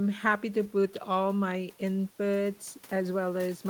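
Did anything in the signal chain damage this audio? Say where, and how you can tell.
No, nothing in the signal chain audibly damaged this speech: no stage from capture through to playback leaves a trace in the sound.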